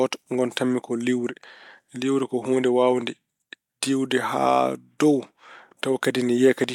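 No technical faults can be heard anywhere in the recording, and the signal stays continuous throughout.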